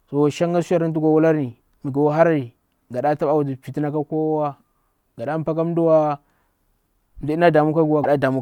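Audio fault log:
8.03–8.06 s, broken MP3 bit reservoir: a 30 ms glitch as the speech jumps ahead, likely because frames were cut out and the next frame, about 24 ms long, looked back for borrowed data and decoded bytes belonging to a different frame.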